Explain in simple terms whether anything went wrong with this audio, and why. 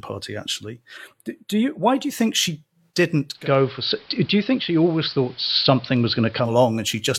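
From 0.97 to 1.97 s, over "do you think she," there is channel delay (comb filtering): one side runs a tiny fraction of a millisecond late, so the mixed sound turns thin and phasey, cutting around 5 kHz, without any added hiss.

From 3.33 to 6.55 s, a digital radio blending to analogue fault switches over to AM within about 0.16 s. Hiss appears, and the loudness shifts slightly. That hiss sets it apart from the first fault.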